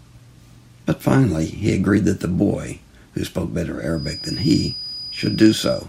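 From 3.89 s until the clip ends at 5.88 s, a feedback whistle sits behind the speech: a thin, steady tone at 4.9 kHz, roughly 15 dB below the voice, swelling and fading slowly in level. The likely cause is a loudspeaker-to-microphone loop balanced right at the edge of feedback, sustaining one frequency without building further. On a spectrogram it shows as a narrow horizontal line at 4.9 kHz starting at 3.89 s.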